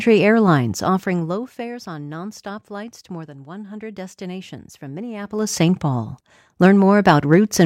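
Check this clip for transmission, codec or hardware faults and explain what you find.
Zipper noise appears twice in this speech, where the gain moves in 1 dB jumps with no smoothing between them. From 0.69 to 1.7 s the level falls by about 15 dB at around fifteen steps a second, heard as a slow, regular ticking. From 5.18 to 5.54 s it rises by about 15 dB at around fifty steps a second, so the clicks blur into a buzzy zip. Each step is an abrupt gain discontinuity that clicks. Unlike random crackle, these ticks are evenly spaced and stop as soon as the level settles.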